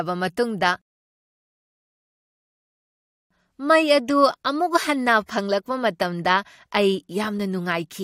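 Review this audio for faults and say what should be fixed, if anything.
A rebuffering stall interrupts the speech at 0.82 s. The sound drops to silence and resumes at 3.31 s, exactly where it stopped. Nothing is lost, but about 2.49 s is added. The player simply ran dry of downloaded audio. A larger playback buffer or adaptive bitrate switching would prevent this.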